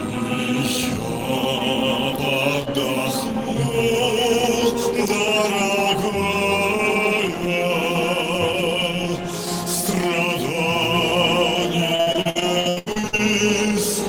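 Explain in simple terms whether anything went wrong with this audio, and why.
Something went wrong near the end: from 11.95 to 13.20 s there is repeated packet loss (robotic sound). Over that stretch, more than a dozen short pieces of audio never arrived in time, the longest about 77 ms, adding up to around 0.6 s missing. Each hole was patched by stretching the sound just before it, so nearly half of that stretch is filler. The result is choppy audio with pieces missing.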